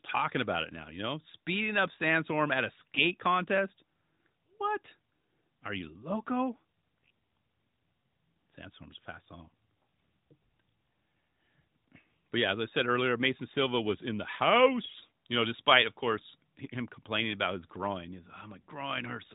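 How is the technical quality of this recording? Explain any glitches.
The speech has been through a narrowband mobile codec, lightly coded AMR-NB with nothing above 4 kHz. Two short glitches stand out.

AMR bit errors occur from 2.80 to 3.01 s, after "at a," and from 14.82 to 15.02 s, between "was in the" and "you know despite of." Weakly protected bits arrived flipped, which misplaced the codec's excitation pulses. Pitch and level hold, but the voice turns briefly scratchy and gargly.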